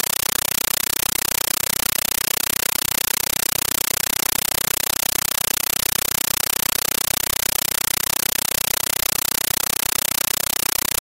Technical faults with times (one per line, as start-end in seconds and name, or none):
0.00-11.03 compressed stream played as audio